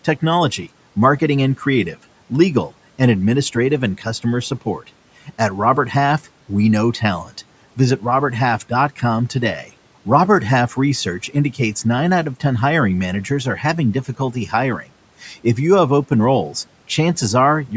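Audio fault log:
14.05–14.53 s speech cut by the noise suppressor: quiet speech taken for noise, dipped about 11 dB, sounding swallowed; waveform envelope sags, spectrogram energy thins.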